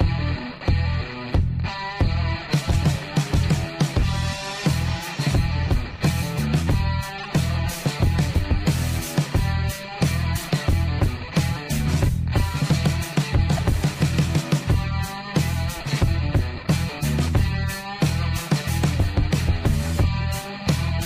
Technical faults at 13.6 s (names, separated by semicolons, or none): corrupt frame decoded